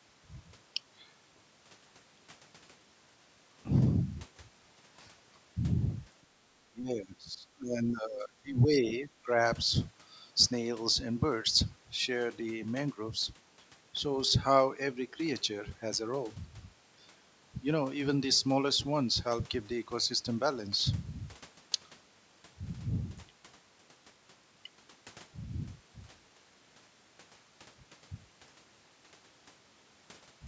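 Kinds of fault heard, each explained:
Background gated by the echo canceller: While the far end was playing through the loudspeaker, the echo canceller pulled the microphone down to stop that sound coming back. The room sound behind the speech drops by about 12 dB from 6.23 to 6.39 s. It is a short dip of roughly 150 ms. The background then comes back as the canceller releases. Because the speech here is a call, the capture is limited to nothing above 8 kHz.
Speech suppressed in double talk: The near talker's speech dips while the other side is also talking. This is likely the echo canceller failing to tell the local talker from the loudspeaker echo, so it turned both down. From 6.71 to 8.86 s the speech is pushed down in stretches totalling about two seconds, at worst by roughly 20 dB. A second, briefer dip follows between 9.08 and 9.38 s, only a fraction of that span and around 10 dB deep.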